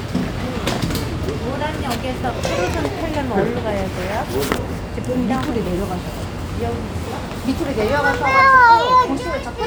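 No technical faults can be heard anywhere in this everyday sound recording.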